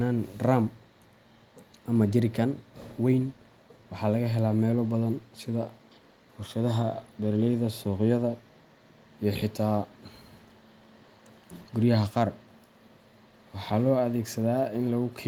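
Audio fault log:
No fault is heard anywhere in the speech. There is nothing to enter in the log.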